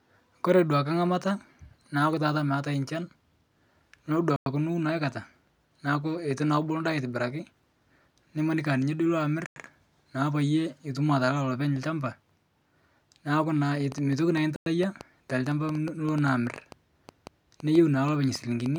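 Speech, broken three times by short, hard-edged silences at 4.36 s, 9.46 s and 14.56 s, each 100 ms long and spaced 5.1 s apart. That regular spacing marks them as gaps between chunks. The audio was delivered in 5-second pieces, and each join got a tenth of a second of dead air, so the flow stops abruptly at every boundary. From 13.92 s to 18.77 s, a train of clicks ticks over the speech and through its pauses, around thirty similar pops at roughly five per second, unevenly spaced and peaking a few decibels above the speech. Repeated, same-shaped pulses like these are likely electrical interference from nearby equipment or a faulty connection or power supply. The third gap falls inside this clicking stretch.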